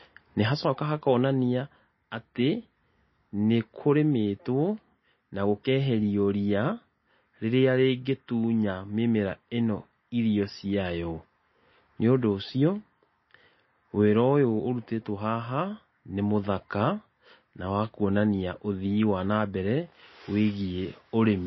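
Right from the start and all the way through, the speech sounds watery and swirly, with nothing above 5.8 kHz. That's likely MP3 compression starved of bits, which fits a bitrate of around 24 kbps: the encoder chops the treble and lets weak frequency detail flicker between frames.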